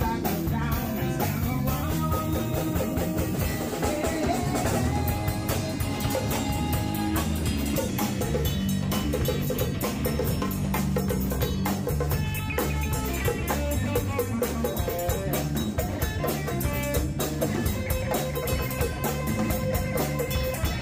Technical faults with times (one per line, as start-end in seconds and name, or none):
1.83-7.89 wrong sample rate